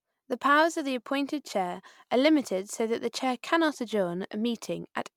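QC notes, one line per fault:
Throughout, generation loss: swirly, smeared, hollow speech with blurred attacks, likely from several MP3 passes at 128 kbit/s, each re-quantising on a shifted frame grid.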